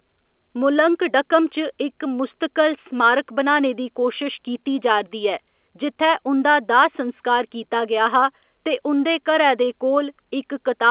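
Nothing in this speech recording points to a technical fault. What comes through is the narrow sound of G.711 telephone coding: nothing above 4 kHz, with a faint noise that rises and falls with the level, which fits an 8 kHz A-law line.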